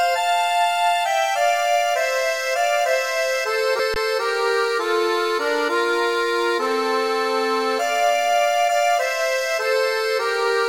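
At 3.79 s the sound jumps abruptly forward with a small blip, likely a stream segment skipped: a chunk of the stream failed to load and playback continued from the next one. On a spectrogram this shows as a sharp vertical seam where the content changes suddenly.

From 3.94 to 3.96 s there is an underrun with held sample. The output buffer emptied and the converter held its last value for 20 ms, so the waveform becomes a flat horizontal line. Hardly any audio was lost, so playback resumes where it stopped with only a soft edge.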